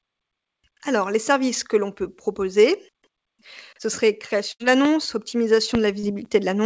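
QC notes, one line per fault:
4.52–4.62 s, burst of packet loss: right after "ce serait", roughly 80 ms never arrived, so the last sound gets stretched and faded, then speech jumps ahead.
4.85 s and 5.75 s, loud pop: two sharp pops riding well above the speech, about 15 dB up, likely a connector or static glitch rather than anything in the recording.
6.00–6.05 s, short concealed packet loss: about 40 ms went missing and got patched by continuing the previous sound, heard as a brief smear before it blends back.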